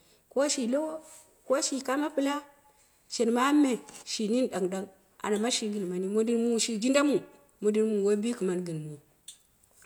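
Speech recording, no technical faults heard.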